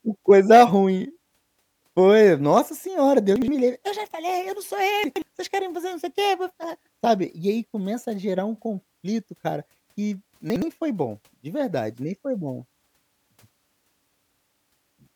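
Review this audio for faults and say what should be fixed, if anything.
A 60 ms chunk arrived late and played after the chunks following it, leaving chunks out of order: three hard joins and a jumbled moment at 3.36–3.48 s after "nossa senhora", 5.04–5.22 s after "falei eu não sou" (two chunks late), and 10.50–10.62 s before "foi bom". Reorder chunks by sequence number before playback.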